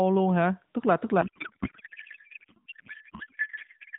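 From 1.22 s, just after "là tức", to the end, a codec payload misread replaces the speech with garbled noise and warble that barely follows it. The sound points to octet-aligned AMR frames being unpacked as bandwidth-efficient, so every field lands in the wrong place. The narrowband AMR coding before it shows only light damage. Unlike packet loss, with its brief gaps or smeared repeats, this corruption persists unbroken once it starts.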